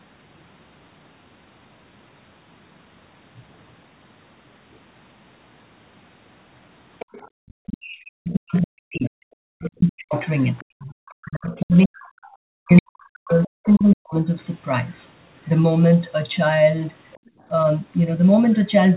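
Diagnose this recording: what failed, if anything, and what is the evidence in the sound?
The call's echo canceller, in the call-processing stage, likely left part of the loudspeaker signal in the microphone feed. The result is the other side's voice leaking through at 6.99–7.5 s, 9.05–13.66 s and 17.13–17.29 s, at about 20 dB below the talker, and about 35 dB below in the last instance.

The echo canceller's suppressor clamped the microphone while the far end played. The background is gated by the echo canceller at 7.28–7.35 s, falling about 36 dB, and at 17.21–17.46 s, falling about 24 dB. The room tone briefly vanishes, then returns.

During overlap, the canceller likely mistook the local talker for echo. The speech is suppressed in double talk between 7.63 and 14.22 s. The talker's voice dips and cuts out in pieces for roughly five seconds in total, with the deepest drops near 40 dB.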